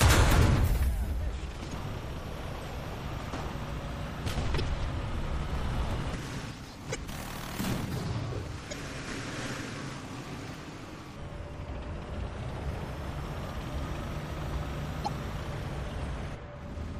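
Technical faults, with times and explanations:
Throughout: MP3 compression, likely the cause of a plainly audible coding sound that points to a low bitrate around 64 kbps. Starved of bits, the encoder has dropped weak frequency lines, which flicker in and out from frame to frame. The result is a watery, swirling texture, metallic chirps on sharp high sounds, and attacks that smear instead of landing cleanly.
1.69–1.73, 4.56–4.61, 6.91–6.96, 8.69–8.73 and 15.04–15.08 s: damaged data in a compressed stream. At each point part of the compressed data is wrong, so the decoder misreads or discards those frames, loses its place and hunts for the next frame header before decoding resumes. Each event lasts about 45 ms and is heard as a short chirp, squawk, click or hole.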